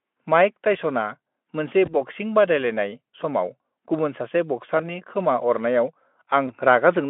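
Speech with VoIP packet loss concealed by the speech codec at 1.85–2.00 s after "माइक टाइस'ना मोनसे", 4.77–4.91 s after "बादायलायनाय समाव गुबुन सासे", and 6.47–6.52 s after "खोमा अरनायाव". Each single 20 ms gap is bridged by the decoder repeating its last pitch and filter at falling gain. On a spectrogram, this shows as briefly smeared, buzzy harmonics. On a waveform, it shows as a short, fading, repetitive stretch before normal detail resumes.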